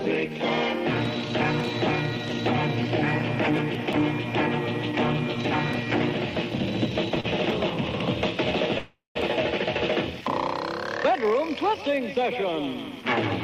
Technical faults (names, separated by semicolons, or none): short stall from a late packet; call audio freeze